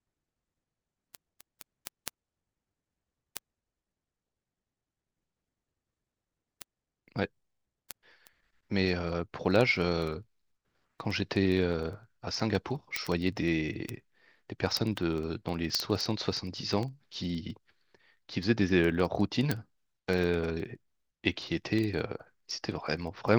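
From 0.12 s to the end of the speech, sharp ticks of uneven strength recur steadily, roughly every 50 ms, hundreds in all. These are word clock ticks: the receiving device runs unlocked from the sender's clock, dropping or repeating one sample per slip, consistent with a mismatch of roughly 400 ppm.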